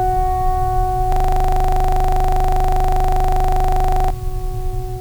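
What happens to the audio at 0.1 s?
Nothing goes wrong at 0.1 s: the music plays through that moment intact, with no dropout, click or distortion.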